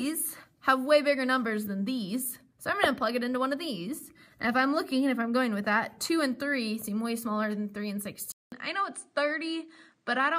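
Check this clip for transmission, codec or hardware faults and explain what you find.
One fault. From 8.32 s to the end, the sound turns duller after a silence of about 0.2 s, with nothing above 9.6 kHz, similar level and a new noise floor roughly 50 dB down. The likely cause is an input switched to a poorer device, whose narrower band and own noise replace the original path.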